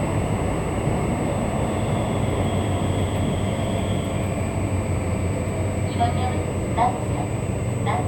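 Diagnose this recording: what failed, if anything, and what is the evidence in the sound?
USB whine via power or ground wiring: 125-microsecond bus microframes leak in as a steady 8 kHz tone, roughly 25 dB below the sound, throughout.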